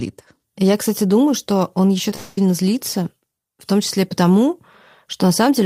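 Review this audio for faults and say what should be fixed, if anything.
Short concealed packet loss at 2.10–2.12 s. About 10 ms of audio never arrived. The receiver filled the gap with continued sound, heard as a brief smear. Prevent it with a larger jitter buffer and forward error correction.

From 2.15 to 2.42 s the sound turns into a fading buzz or hiss lasting about 0.22 s before normal audio returns. A long network dropout is the likely cause. Prevent it with a more stable network path or redundant packet transmission.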